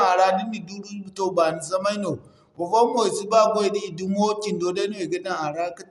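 From start to finish the speech sounds dull and muffled, with nothing above 11.5 kHz, and there's a rough, fluttery haze clinging to the voiced parts. That's likely Dolby Digital compression starved of bits. The damage is plainly audible, which points to a low bitrate in the region of 64 kbps. The encoder has cut the band short and left many frequency lines without real data, so the decoder fills those gaps with dither noise, and you hear that as grit around the tones.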